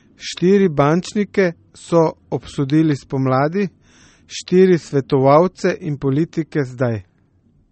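MP3 compression runs throughout: nothing sounds above 8.4 kHz, and the speech turns watery and swirly, likely from a low bitrate consistent with 32 kbps.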